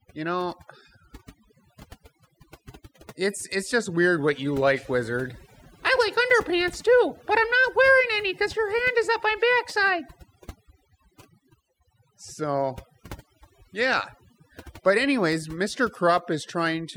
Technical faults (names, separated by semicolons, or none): overdone noise removal